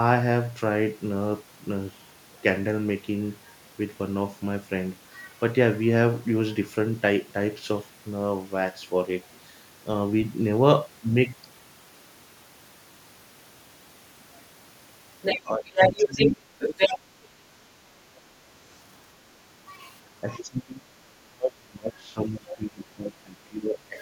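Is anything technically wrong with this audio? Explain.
Yes. The clip is speech, and it has two related echo-control faults.

Other side's voice leaking through: a second voice appears from 15.22 to 15.4 s, 15.66 to 16.29 s, 16.59 to 16.99 s, and 22.49 to 22.54 s. In the first three stretches it is roughly as loud as the talker, or about 5 dB louder. At 22.5 s it is only a faint scrap about 15 dB down. The likely cause is a loudspeaker on the talker's device whose output the echo canceller did not fully remove from the microphone.

Speech suppressed in double talk: the talker's level dips from 15.39 to 15.7 s by about 20 dB and from 15.9 to 16.37 s by about 10 dB. It drops again by about 30 dB from 20.23 to 20.98 s and from 21.17 s to the end of the clip. The early dips coincide with the leaking voice, which points to an echo canceller that likely could not separate the two sides and attenuated both.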